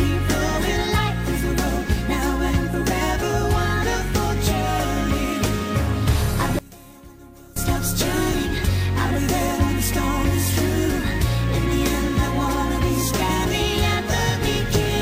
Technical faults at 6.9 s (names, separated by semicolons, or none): one channel inverted